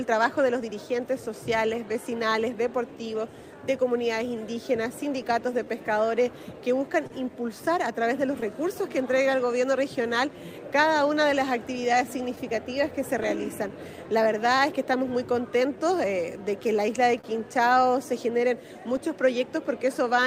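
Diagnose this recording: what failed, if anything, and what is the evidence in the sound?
This is a network and jitter-buffer fault. The sender's clock runs about 2 percent slow against the receiver's, which is clock drift between sender and receiver. The buffer keeps draining, and small timing hiccups recur unevenly through the whole clip.

Repeated timing corrections run from 0.82 s to 20.20 s. The receiver stretches short pieces to keep pace with the slower sender, so playback runs at 98 percent speed. In total, roughly a third of a second is added.

Scattered short gaps appear at the network stage. About four occur between 4.89 s and 8.43 s, the longest around 30 ms. About seven more, the longest around 10 ms, fall between 11.48 s and 14.60 s. Concealment extends the last sound, leaving brief ticks or smears.

There is a short stall from a late packet at 17.21 to 17.25 s. The packet arrived 27 ms late, and the jitter buffer ran empty. 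The receiver held the last sound for 27 ms, then resumed without losing anything, leaving a sound held too long.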